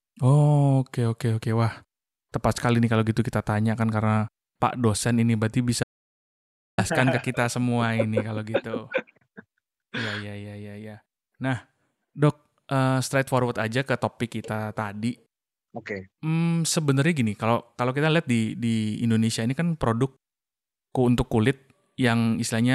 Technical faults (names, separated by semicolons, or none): audio dropout to silence